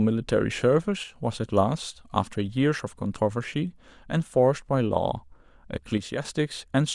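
Speech clip. The level drops abruptly by about 6 dB from 1.04 to 1.16 s and from 5.98 to 6.25 s. This is likely one channel dropping out before the mono sum.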